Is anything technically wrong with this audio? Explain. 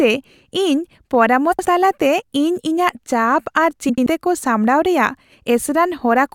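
Yes. There are frames out of order at 1.52–1.65 s and again at 3.89–4.07 s. In each place, two adjacent runs of coded frames were decoded in swapped order, so each short stretch plays with its halves exchanged. The swapped blocks are about 64 ms and 85 ms long, which fits runs of three and four frames. Each event sounds like a brief garbled flutter. No time is lost.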